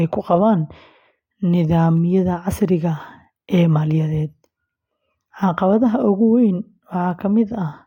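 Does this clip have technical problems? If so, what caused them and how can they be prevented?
Yes. There are three sharp clicks in the speech, at 1.97 s, 3.25 s and 7.11 s. Each is a single brief tick, a thin vertical line across the spectrum. The likely cause is dropped samples. A handful of samples, under a tenth of a millisecond, go missing. The waveform then jumps straight to a later value. The gap is far too short to remove any sound. The step itself is what you hear. To prevent it, give the capture and playback chain larger buffers so no samples are skipped.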